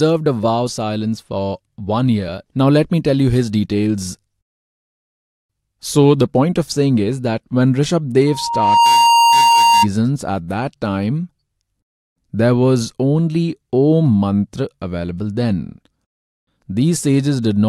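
A microphone in this speech recording picked up the loudspeaker it was feeding, closing a loop whose gain passed one at 931 Hz: loudspeaker feedback squeal. From 8.27 to 9.87 s that tone swells over about half a second into a steady whistle, a little louder than the speech.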